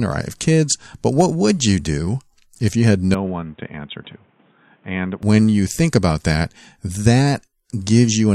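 In this speech clip, from 3.15 s to 5.23 s, just after "do if you had" and until "you think about that", the sound turns dull and boxy, loses everything above 3.8 kHz, drops roughly 10 dB and gains new background noise about 30 dB below the speech, with no gap at either change. The likely cause is an input switched to a poorer device mid-recording.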